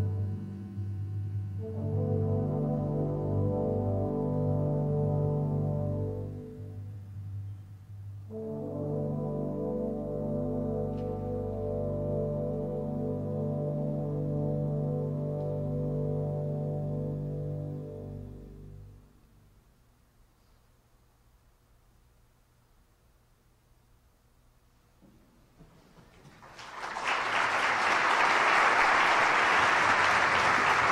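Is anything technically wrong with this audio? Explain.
No, nothing is technically wrong with this audio.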